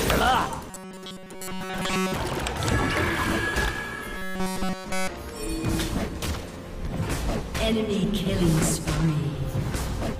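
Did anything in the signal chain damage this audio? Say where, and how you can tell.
Yes. Robotic sound from repeated short buffers at 0.70–2.16 s and 4.17–5.08 s. A rigid 188 Hz buzz is imposed on the sound. A starved buffer likely loops 5 ms chunks.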